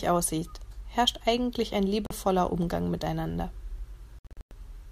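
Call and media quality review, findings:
Bluetooth dropout, 2.06–2.11 s, just after "aussieht herrscht eigentlich ein": about 41 ms silence, speech resumes mid-flow as if it had played on. Waveform flatlines, spectrogram shows a full-band blank vertical stripe. Likely cause: the wireless link missing delivery of a couple of packets.

Bluetooth dropout, 4.19–4.51 s: a cluster of holes across roughly 325 ms, about 244 ms lost in total, longest gap about 0.1 s. Spectrogram shows a comb of blank stripes, waveform is chopped. Likely cause: a dozen or so late packets discarded.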